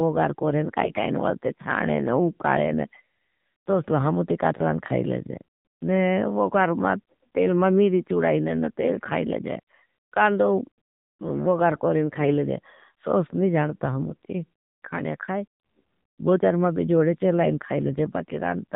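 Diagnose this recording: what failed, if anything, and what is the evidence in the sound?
The whole speech clip has passed through the AMR narrowband mobile codec, a codec-stage fault. Nothing above 4 kHz survives, so sibilants are dull and the sound is boxed in. The voice has a plainly audible buzzy, synthetic edge, which fits one of the lower AMR-NB modes around 7.4 kbps. At that rate the vocal-tract model gets only a few excitation pulses per 5 ms subframe. The voice is rebuilt from that sparse description rather than carried as a waveform.

Two bursts of AMR bit errors point to the network stage, a weak radio link. The first runs from 0.82 to 1.07 s. The second is brief, 14.08 to 14.15 s, between "सोस नहीं जानता" and "ती काणया खाई". In both, pitch and level hold roughly steady but the voice turns hoarse, scratchy and gargly. The sound points to several frames hit at a few percent bit error rate. 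The frames passed their checksum, but their weakly protected bits were flipped, misplacing pulses and skewing the gain and spectral values.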